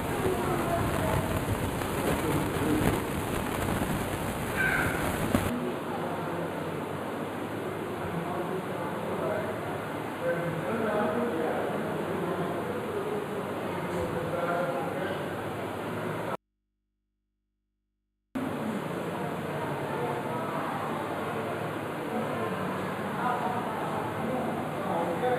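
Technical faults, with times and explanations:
Throughout: channel delay (comb filtering). One channel trails the other by just a few samples, roughly a tenth of a millisecond, so folding them to mono cancels shared content in evenly spaced notches starting around 5 kHz, leaving the top end hollow and phasey.
16.35–18.35 s: audio dropout to a faint residue. The sound cuts out abruptly for 2.0 s, and the gap holds just mains hum, roughly 50 dB below the signal. It's likely the source feed dropping while the input downstream stayed open.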